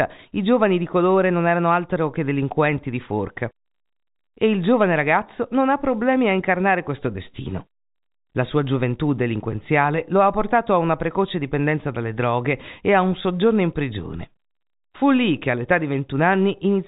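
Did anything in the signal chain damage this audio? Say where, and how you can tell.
No, nothing in the chain damaged this speech. It has passed through G.711 telephone coding, which can be heard as a band that stops near 3.8 kHz and fits the 64 kbps A-law variant, with any quantisation noise faint at most.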